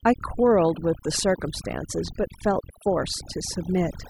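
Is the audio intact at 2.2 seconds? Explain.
No. At 2.2 s, as throughout the speech, a switching supply whistle sits near 3 kHz, drifting between about 2.97 and 2.99 kHz at roughly 25 dB below the voice, from a power supply running in audible burst mode or beating with another supply. Overdone noise removal is also present for the whole clip, with bands near the noise floor cut away, leaving twinkling specks in a lowered background.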